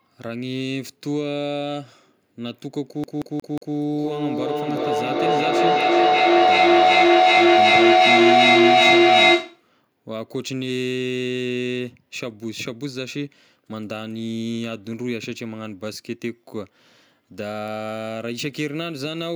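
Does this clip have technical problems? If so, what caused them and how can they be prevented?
Yes. A CD stuck on one turn runs from 3.04 to 3.76 s. A scratch on the disc throws the laser back one track at the same point on each rotation, so the same 0.18 s slice of speech plays four times, with a brief mute at every jump. The result is the quick, perfectly even stutter of a skipping CD rather than a natural hesitation. Cleaning or replacing the disc, or ripping it with an error-correcting ripper, prevents this.

Feedback echo between two devices runs from 3.92 to 9.71 s. Two devices in the same room share the call, and each one's loudspeaker output reaches the other's microphone. Each device's echo canceller removes only its own playback, so the sound circulates around the loop and returns at around 0.4 s intervals, thinner and more ringing with each pass. Here the loop gain is high enough that the repeats build up instead of fading, peaking at about 12 dB above the speech itself. 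Muting the microphone and speaker on all but one device in the room prevents this.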